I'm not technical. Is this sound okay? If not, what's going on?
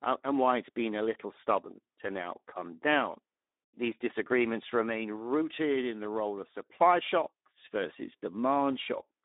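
No. From start to finish the speech sounds hoarse and grainy, and thin like an old phone line, with nothing above about 3.8 kHz. This is Speex codec damage: an older voice-chat compression that keeps too little detail, so the voice roughens.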